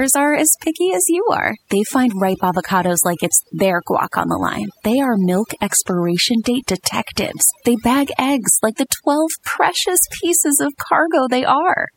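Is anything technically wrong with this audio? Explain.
Yes, there's overdone noise removal throughout: an aggressive reducer gated bands near its noise estimate, taking quiet parts of the voice with them and leaving near-silent twinkling gaps.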